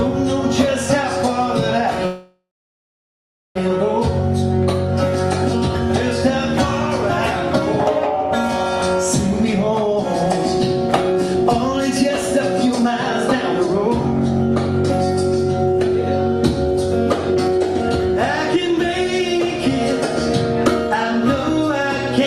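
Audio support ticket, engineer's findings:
Call audio freeze, 2.05 to 3.57 s. Sound stalls; last fragment drawn out as a fading buzz, then about 1.1 s of silence, then resumes exactly where it stopped. Likely jitter buffer underrun from held-up packets; receiver concealment filled roughly 1.5 s. Unlike a packet-loss dropout, nothing is skipped: a gap is inserted and playback runs about 1.5 s later afterwards.

Jitter buffer speed-up, four stretches: 9.44 to 9.99 s at 120% speed, 11.12 to 12.90 s at 109%, 17.34 to 19.69 s at 111%, 20.87 to 22.20 s at 105%. Sound hurried, pitch unchanged. Buffer overfilled after late packets arrived together; receiver cut repeated pitch-period slices, roughly a tenth of a second at the first stretch and about a third of a second at the third, to shed delay. Not a resampling error, which would raise the pitch.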